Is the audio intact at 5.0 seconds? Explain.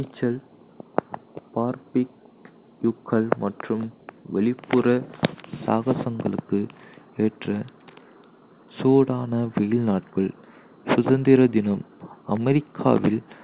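Yes, the speech at 5.0 seconds is intact, with no dropout, glitch or distortion at that moment.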